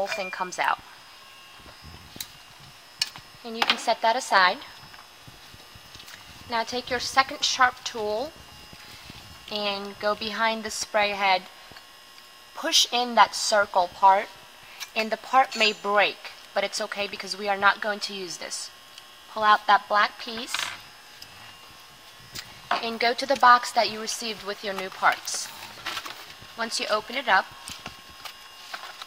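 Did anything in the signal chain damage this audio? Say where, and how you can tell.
No, nothing in the signal chain damaged this audio.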